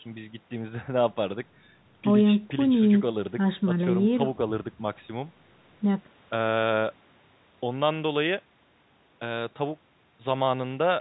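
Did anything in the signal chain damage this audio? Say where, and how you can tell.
No, nothing in the chain damaged this speech.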